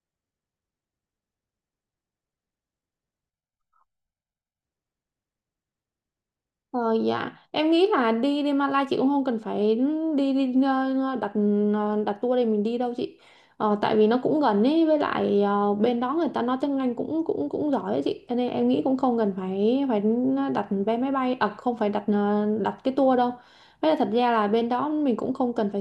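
A speech recording with a channel delay (comb filtering) fault from 3.30 to 4.63 s: one channel lags the other by about 1.5 ms before the two are summed to mono, cancelling shared content in evenly spaced notches starting around 400 Hz, so the speech turns hollow and phasey.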